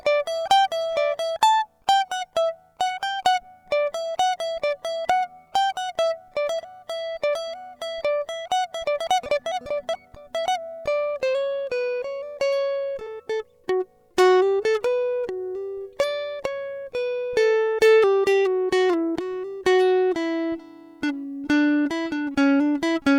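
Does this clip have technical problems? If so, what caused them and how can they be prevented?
Yes: compressed frames skipped at 9.51–9.55 s, 13.06 s and 21.85 s. The music jumps ahead by roughly seventy, forty and thirty milliseconds, whole 10 ms frames lost. The frames were missing from the file or refused by the decoder as damaged, so they were never played. Prevent it by verifying file integrity and using error-protected transmission or storage.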